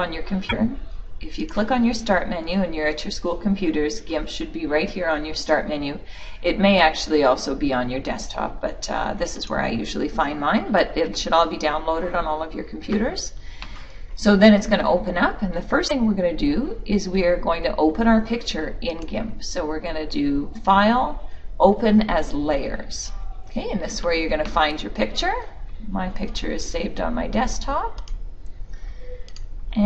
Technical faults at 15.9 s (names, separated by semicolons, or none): damaged data in a compressed stream